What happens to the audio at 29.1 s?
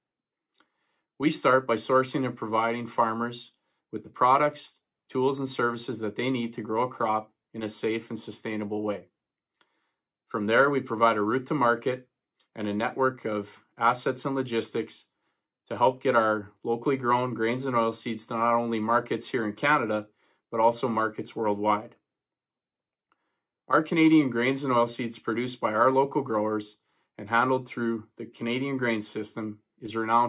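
At 29.1 s the audio plays through intact, with no dropout, click, distortion or other fault.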